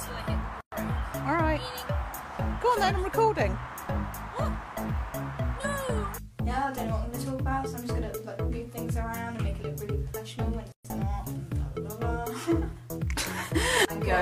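Brief silences cut into the sound at 0.61 to 0.72 s and 10.72 to 10.85 s, each roughly 120 ms. These are gaps at a join of encoded pieces, ten seconds apart, where separately encoded pieces were joined with their encoder padding left in.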